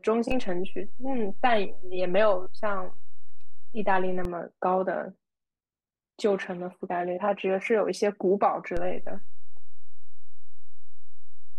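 Low thumps mark a DC step at 0.32 s, returning at 4.25 s, and again at 8.77 s, holding to the end: the waveform's zero line jumps by about -22 dBFS while the speech continues unchanged.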